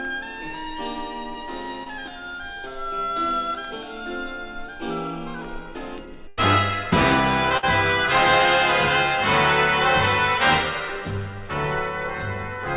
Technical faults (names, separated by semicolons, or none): short concealed packet loss; burst of packet loss